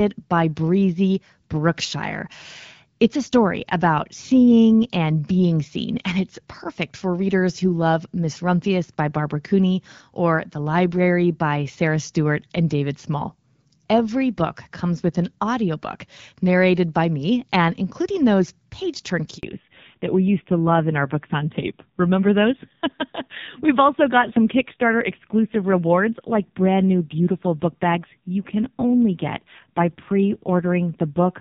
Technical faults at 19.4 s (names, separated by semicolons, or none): handover gap; fallback to narrowband